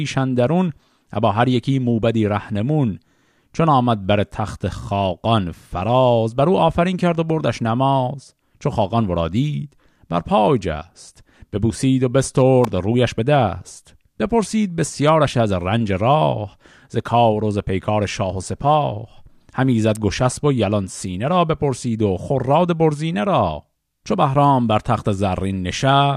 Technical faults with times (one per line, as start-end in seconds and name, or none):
12.64 electrical switching spike
19.95 electrical switching spike